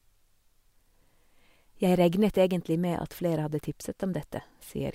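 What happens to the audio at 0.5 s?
Nothing goes wrong at 0.5 s; the speech carries through that moment with no break, glitch or distortion.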